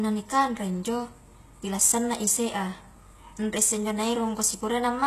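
A speech recording that was likely passed through HE-AAC compression at a low bitrate, consistent with roughly 16 kbps, for its whole length. The treble is rebuilt from copied lower bands rather than coded, so s sounds come out gritty and lispy. Nothing is present above about 12.3 kHz.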